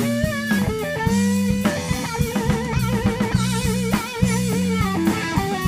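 No technical faults can be heard anywhere in this clip.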